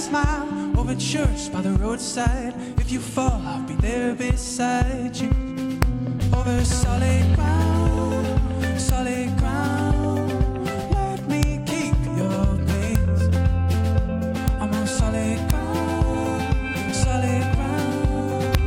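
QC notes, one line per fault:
5.82, 8.89, 11.43, 12.95, 14.48, 15.50 and 18.55 s, integer overflow: peaks barely reaching the integer limit made the value wrap to the opposite sign instead of being limited, so each swings across the whole range and cracks far more sharply than clipping would.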